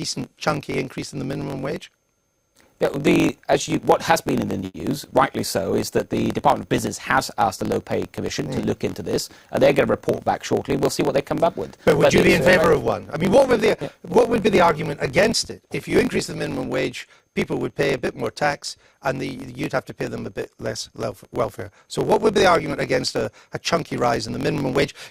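A block size mismatch (truncated) runs through the whole clip. One stage writes longer blocks than the next reads, so the tail of every block is discarded. This produces a steady buzz at about 45.9 Hz, which fits a 1024-sample written block, and the audio plays 1.07 times fast at roughly its normal pitch.

From 4.65 to 4.75 s a short stall from a late packet occurs. The jitter buffer ran dry, and the receiver held the last sound for 90 ms until the packet arrived, then resumed in place. Nothing is lost, but that sound lingers audibly, and the overall delay grows by 90 ms.

Jitter buffer speed-up appears from 15.61 to 16.52 s and again from 23.82 to 24.34 s. The receiver trimmed surplus buffered audio by cutting many short pitch-period pieces, roughly 50 ms and 40 ms in total. Playback there runs at 105% and 106% speed with unchanged pitch, sounding slightly rushed.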